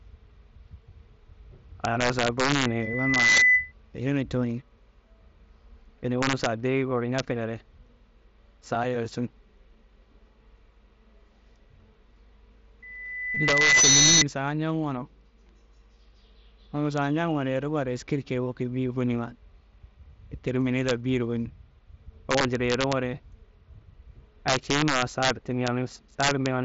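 A gain or summing stage in this speech path lets values run past the largest integer instead of limiting them. Throughout the clip the signal is driven about 4 dB beyond that ceiling, so the loudest peaks, a small fraction of a percent of samples, wrap to the opposite extreme. This is integer overflow, and it produces sudden hard cracks on loud syllables, much harsher and more abrupt than ordinary clipping.

From 2.64 to 3.72 s, the microphone picks up the loudspeaker it feeds, and at 2 kHz the loop gain exceeds unity. A loudspeaker feedback squeal builds there over a little under a second into a steady whistle roughly 10 dB above the speech before the loop is broken. The same loop closes again from 12.82 to 14.25 s at 2 kHz, this time swelling more slowly, over about a second, to a similar level.

At 13.35 s, inside that second squeal, the link between headset and phone drops about 15 ms of audio, which fits a couple of lost frames. 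The receiver fills the gap by repeating the best-matching stretch of recent waveform. This concealed Bluetooth headset packet loss is heard as a brief buzzy blip held at full level and a slight warble where real audio resumes. Underneath, the mSBC link carries speech up to 8 kHz with a light graininess on louder sounds.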